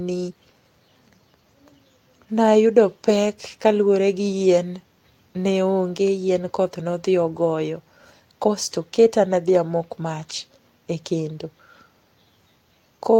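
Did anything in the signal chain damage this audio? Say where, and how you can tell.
Yes, at the network stage: one packet lost around 11.29 to 11.31 s was rebuilt from error correction. The 20 ms frame sounds rougher and noisier but has no gap, unlike concealment's smeared fill.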